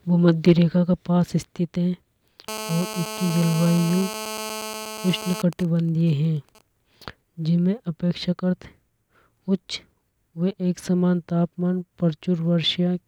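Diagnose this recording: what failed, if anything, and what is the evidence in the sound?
The first fault is hard clipping at the converter or an input gain stage. From 0.48 to 0.52 s the speech peaks are cut flat, just before "रेखा के पास स्थित". The overload is small, about 2 dB, so it sounds like a brief crackle on the loudest peaks. There is no sustained fuzz. The flattened tops add harmonics high in the spectrum, and that makes the sharp edge on those peaks.

The second fault is GSM phone buzz, picked up in the analogue wiring. From 2.49 to 5.42 s a hard, raspy buzz runs under the speech. It sits at about 217 Hz, with a dense stack of harmonics, and about 11 dB below the signal. It stays steady throughout, which fits a nearby 2G phone in an active call. The circuit rectifies the phone's radio pulses into audio, and the buzz does not follow the sound.

The third fault is GSM signalling bursts, again in the analogue wiring. 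From 5.53 to 6.61 s the steady buzz gives way to a pattern of even ticks. It is made of 217 Hz ticks with a longer buzz twice a second. The pattern is faint, roughly 25 dB below the signal. It fits the same phone still in its call, sending only sparse burst groups while its user is silent. The audio circuit rectifies these as well.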